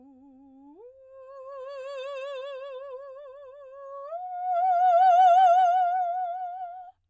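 A musical excerpt with no audible technical faults anywhere in the signal.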